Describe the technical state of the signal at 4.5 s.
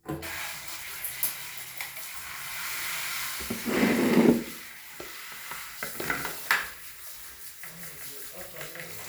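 At 4.5 s the sound is intact, with no dropout, clipping, glitch or other technical fault at that moment.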